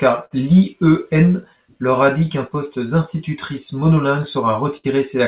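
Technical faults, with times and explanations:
Throughout: clock drift between sender and receiver. The sending side's clock runs slow, by about 5 percent. Audio arrives a little slower than it is played out, so the jitter buffer keeps draining. The receiver must fill the gap by repeating small pieces of sound. The result is a faint, recurring unevenness in the timing of the speech, spread irregularly across the clip.
0.25 to 0.33 s and 4.77 to 4.86 s: short stall from a late packet. Each time, a packet came in late and the buffer had nothing left to play. The receiver held the last sound for 59 ms in the first case and 68 ms in the second, then carried on from the same point. No speech is lost. The held sound stretches unnaturally, with a slight buzzy or dipped quality, and the delay grows by the same amount.
1.13 to 4.45 s: repeated timing corrections. Across this stretch the receiver keeps inserting short repeated fragments to make up for the slow sender, playing the speech at about 95 percent of its proper pace. 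Around 150 ms is added in total. The edits all push the same way but are spaced unevenly. Each one is tiny. The sound carries nothing above 4 kHz, which fits a narrowband G.711 call codec.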